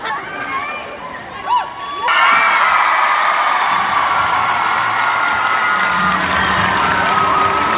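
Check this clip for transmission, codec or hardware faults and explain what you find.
One transmission fault is present: a skip ahead at about 2.08 s. The sound lurches forward with no pause or fill. Roughly a second of audio simply never plays, and the material on either side of the jump is butted together almost seamlessly. This happens when a block of audio is discarded in transit or flushed by an overflowing jitter buffer while later packets are already queued, so playback resumes about a second further on. Throughout, the narrowband call path caps the audio at 4 kHz, consistent with G.711 A-law.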